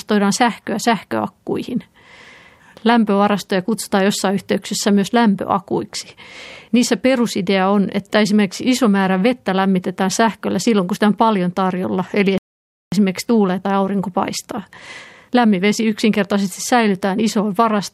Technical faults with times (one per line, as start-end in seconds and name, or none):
12.38-12.92 playback stall
12.92-15.92 time-compressed catch-up